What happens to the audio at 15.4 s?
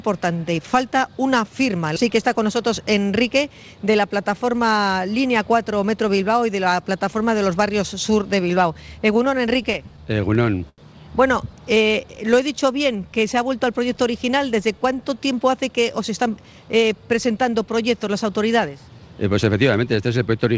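From 15.40 to 16.94 s a jitter buffer speed-up plays the audio at 111%. The receiver trims repeated pitch-period-sized slices to drain surplus buffered delay, about a fifth of a second in total. It sounds hurried, yet pitch stays put, unlike a faster resampled playback.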